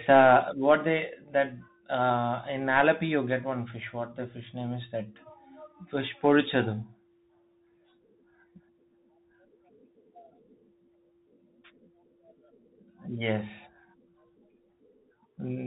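Speech carrying plainly audible Bluetooth CVSD headset codec damage from start to finish: a spectrogram shows energy cut off sharply at 4 kHz, with granular hiss filling the gaps. Sibilants sound scratchy, and loud peaks outrun the one-bit slope tracking, which fits a 64 kbps stream.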